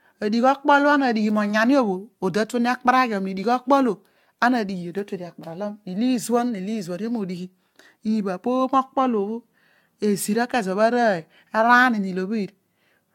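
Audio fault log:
throughout generation loss: the speech is swirly, smeared and hollow, with blurred attacks and nothing above 17 kHz. The likely cause is about seven lossy re-encodes, consistent with AAC-LC near 96 kbit/s. Each pass requantises on a shifted frame grid, so noise and spectral holes pile up.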